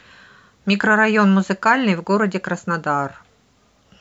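No technical faults are audible anywhere in the speech recording.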